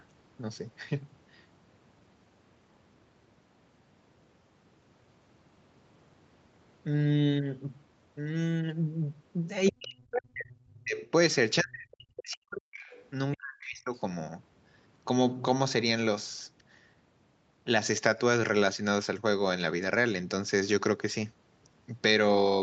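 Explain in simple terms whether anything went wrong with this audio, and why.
Between 9.7 and 13.9 seconds the speech gets pushed down hard in three patches (9.7 to 11.0, 11.6 to 12.8, 13.4 to 13.9 s). That's speech suppressed in double talk, likely because both sides spoke at once and the echo canceller, unable to separate this talker from the loudspeaker echo, turned both down.

Faint scraps of the other side's voice leaking through show up at 9.67 to 10.05, 11.92 to 11.96, 12.18 to 12.36, 12.80 to 13.03 and 13.95 to 14.00 s. Their voice, played on this talker's loudspeaker, probably reached this microphone and wasn't fully cancelled.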